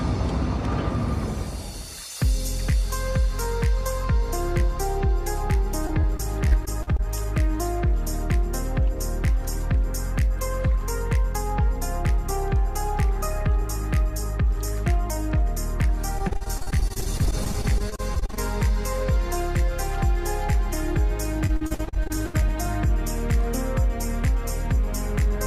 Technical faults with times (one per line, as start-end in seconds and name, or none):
5.87-7.00 repeated packet loss (robotic sound)
16.18-18.39 repeated packet loss (robotic sound)
21.47-22.36 repeated packet loss (robotic sound)